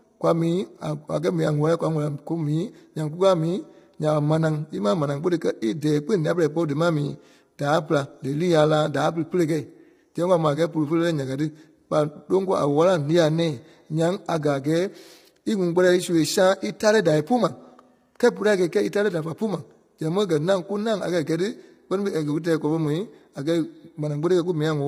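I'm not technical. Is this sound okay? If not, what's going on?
No. The speech was likely heavily squeezed by low-delay AAC compression, the kind video calls use, so voices sound rough, grainy and artificial throughout.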